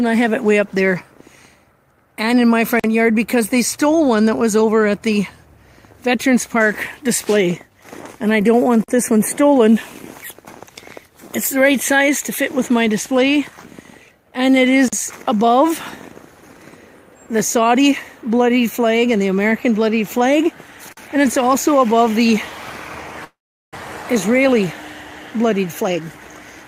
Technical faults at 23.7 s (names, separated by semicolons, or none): call audio freeze